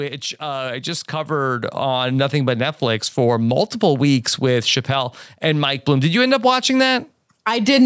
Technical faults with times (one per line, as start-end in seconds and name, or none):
0.39-2.85 automatic gain rising